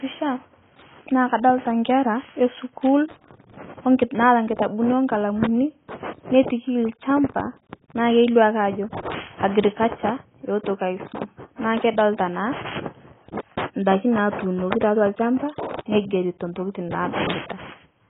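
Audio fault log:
Throughout: AAC compression, likely from a low-bitrate AAC-LC encode around 16 kbps. Nothing survives above about 3.7 kHz, so the speech sounds dull and boxed-in. The heavy quantisation smears consonants and leaves a warbly, fizzy texture on sibilants and held sounds.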